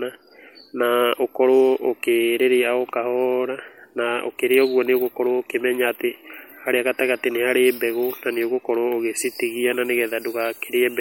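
From 9.19 s to the end at 11.00 s, a steady, thin hiss sits on the speech, climbing sharply toward the top of the band and lying only roughly 20 dB below it. This is low bit depth with noise shaping: coarse rounding, consistent with 8 bits, whose error was pushed upward in frequency.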